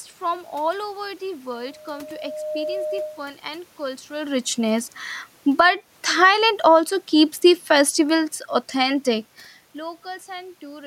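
Just after "and cultural richness", automatic gain falling starts at 5.44 s: the gain control judges the input too loud or its background noise too strong and eases it down about 5 dB by 6.39 s. The waveform envelope and background noise floor sink together. Overlapping it, automatic gain rising runs from 5.66 to 7.12 s, lifting about 6 dB before "the festivals authentic". Speech and room noise swell in unison, visible as a broadband brightening across the spectrogram.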